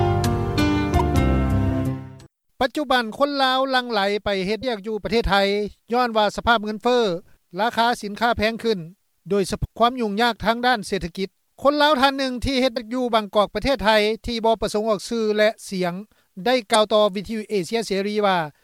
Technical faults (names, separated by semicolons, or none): damaged data in a compressed stream